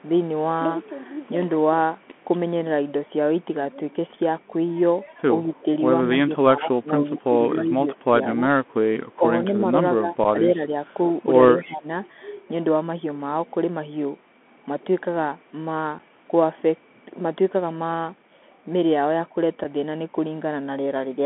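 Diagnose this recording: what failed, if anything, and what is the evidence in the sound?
Throughout, the speech is narrowband and gritty. Nothing comes through outside roughly 200 Hz to 3.4 kHz, s sounds are scratchy, and a granular hiss sits underneath. This is the Bluetooth CVSD headset codec, and it points to a 64 kbit/s CVSD link. Its one-bit delta modulation can't track fast, loud high-frequency detail.

At the call-processing stage, the speech dips and thins at 5.46 to 5.66 s, 6.08 to 8.47 s, 8.79 to 9.24 s, 9.61 to 10.86 s and 11.57 to 11.88 s, dropping by about 5 to 15 dB. This is likely speech suppressed in double talk, with the echo canceller attenuating the talker while both ends spoke.

Also at the call-processing stage, a very faint delayed copy of the sound, around 40 dB below the speech, surfaces briefly at 8.0 s, arriving about 203 ms late. This is likely echo leak: the far end's echo canceller failed to remove all of the loudspeaker sound its microphone picked up, and sent that residue back.

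On the wireless link, there are abrupt 7.5 ms holes at 10.24 s, 15.99 s and 19.64 s. This is unconcealed Bluetooth headset packet loss. Each gap fits a single lost headset packet that was replaced by silence or an idle pattern rather than being concealed.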